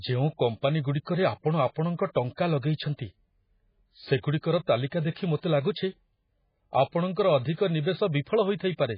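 MP3 compression damage runs through the whole of this speech clip, and it is heavy. Nothing is left above about 5.1 kHz, so the treble is cut off flat and sibilants lose their edge. The remaining sound has a watery, swirling texture, because weak frequency components drop in and out from one frame to the next, and consonant attacks come out smeared. That pattern fits a very low bitrate, likely around 16 kbps.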